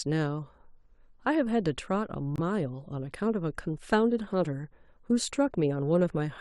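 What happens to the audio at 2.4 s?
At about 2.36 s the speech cuts to dead silence for roughly 42 ms, until 2.40 s. This is a corrupt frame muted: damaged compressed data was rejected by the decoder and replaced with silence, which fits two lost frames. The onset is abrupt, with no fade, and timing is preserved, so nothing is skipped or shifted. That sets it apart from concealment, which would fill the gap with smeared sound.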